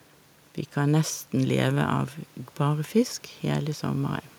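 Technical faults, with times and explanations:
No technical faults are present in the speech, with only the room's own background noise present at about 34 dB below it.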